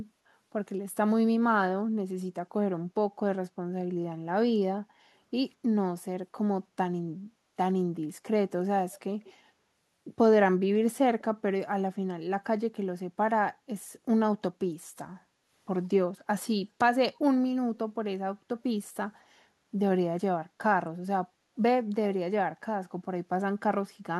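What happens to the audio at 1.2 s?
Nothing goes wrong at 1.2 s; the speech runs through that moment intact.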